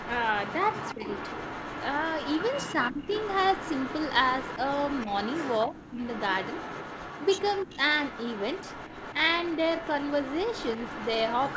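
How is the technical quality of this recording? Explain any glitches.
The recording has two recurring problems: an audible echo of the speech running through almost all of it, and brief dips in the speech where that echo overlaps it. The audio stops at 8 kHz, which fits a G.722 call path at 64 kbps.

Echo leak, from 0 to 4.21 s, 4.38 to 7.75 s, and 8.05 s to the end: a delayed copy of the speech trails the original by about 316 to 320 ms, around 10 dB below it at first and about 15 dB below later. The likely cause is a far end playing the call over a loudspeaker, with its echo canceller failing to fully remove what its microphone picked up, so the remainder was returned along the call.

Speech suppressed in double talk, at 0.94 to 1.06 s, 2.75 to 3.13 s, 5.67 to 5.98 s, and 7.65 to 7.8 s: the speech briefly sinks or breaks up, most deeply around 2.75 to 3.13 s (a drop of roughly 20 dB) and lightly near 7.7 s. 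This is likely an echo canceller that could not separate the talker from the overlapping echo and attenuated both for a fraction of a second.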